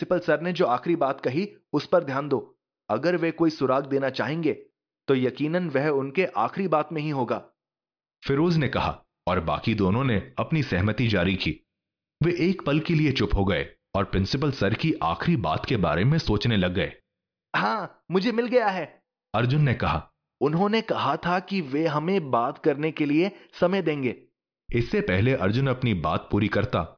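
No technical faults can be heard anywhere in the recording; the signal stays continuous and stable throughout.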